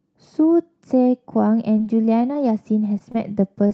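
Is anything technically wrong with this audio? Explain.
Yes. There are four short concealed packet losses, at 1.78, 2.33, 3.12 and 3.68 s. Each time about 20 ms of the call arrived too late, so the receiver extended the preceding sound and blended back, leaving a brief smear or wobble, with the call's 8 kHz bandwidth limit throughout.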